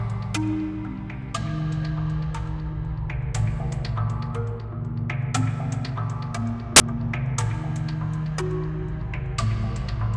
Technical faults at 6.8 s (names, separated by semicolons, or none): file tags played as audio